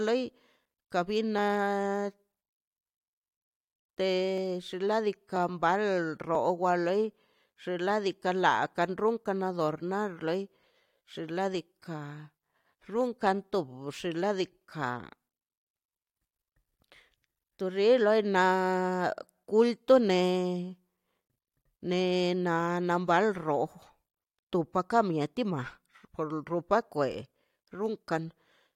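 Small skips break the speech at 1.39, 4.38, 5.36 and 6.35 s, the last just before "loi xinladika laika runkan". This is overlap between stream segments: 1-second segments overlapped in time, and trimming removed 7 to 18 ms of genuine audio.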